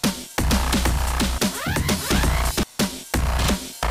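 From 0.49 s to 2.63 s there's a doubled audio track: a second full-band copy trails the sound by about half a second at roughly the same level, with no decay, popping in and out abruptly. Likely a second, slower capture path mixed in.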